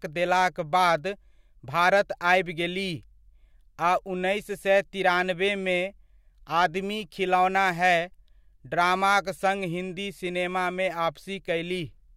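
Speech recording with no audible technical faults to report.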